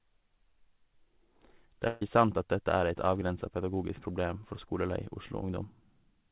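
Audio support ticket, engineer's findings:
Burst of packet loss at 1.87–2.02 s: concealment smears the last sound into a fading buzz/hiss for about 140 ms, then audio jumps ahead; 4 kHz band-limit is just the G.711 call path.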